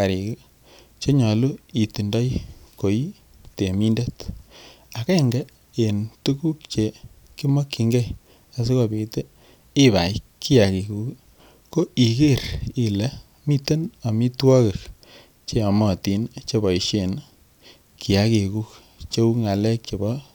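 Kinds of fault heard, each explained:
No faults detected in the speech.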